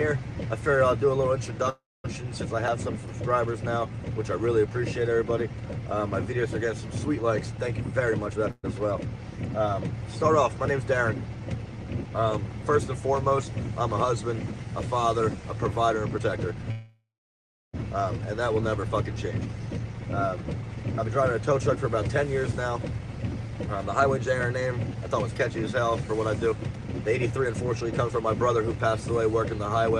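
First up, at 1.69 to 2.06 s, there's a call audio freeze. The last bit of sound gets stretched into a fading buzz that drops to silence, about 350 ms of fill in all, roughly 230 ms of it silent, before things pick up exactly where they left off. Nothing's lost; a gap just gets wedged in. The likely cause is packets stalling in transit so the jitter buffer ran dry.

From 7.84 to 8.44 s you get a jitter buffer speed-up. The receiver is clawing back excess delay by snipping out tiny pitch-period chunks, so playback runs at about 124% with the pitch unchanged and sounds hurried. Roughly 150 ms gets trimmed.

Right after, 8.51 to 8.65 s brings another freeze, short this time: about 124 ms of filler, with around 40 ms of that silent.

Then 16.1 to 16.67 s is another speed-up, harder at about 133%, cutting around 200 ms.

Straight after, the worst freeze runs 16.71 to 17.75 s. A fading tail plus about 700 ms of silence puts roughly a second of gap into the audio.

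Finally, from 19.04 s to 29.91 s there's a long, gentle speed-up at about 110%. It shaves off around a second over that stretch, so everything feels slightly rushed.

Throughout, the Opus call path tops out around 12 kHz.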